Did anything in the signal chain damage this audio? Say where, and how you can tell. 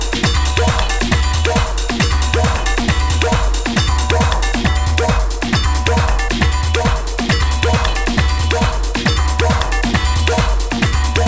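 No, nothing along the chain has left an audible mark on this audio, so there is no damaged stage to point to.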